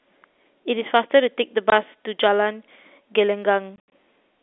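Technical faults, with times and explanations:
1.70 to 1.72 s: packet loss filled with silence. A single 20 ms hole drops the speech to dead silence, which fits one lost 20 ms packet. The receiver inserted nothing in its place, leaving abrupt edges.
3.76 to 3.92 s: packet loss filled with silence. About 120 ms goes missing in bursts over 160 ms, the longest gap 80 ms, which points to six lost 20 ms packets. Each silent gap has hard edges. The narrow G.711 telephone band carries through.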